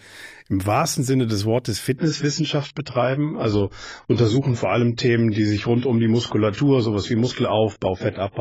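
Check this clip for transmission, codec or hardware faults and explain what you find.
There's one fault here, an adaptive stream at a lower bitrate. From 1.97 s to the end, quality drops abruptly with no gap. Everything above 7.6 kHz disappears and coding artefacts thicken, which fits the stream switching down to a low AAC bitrate, around 16 kbit/s, as the connection slowed.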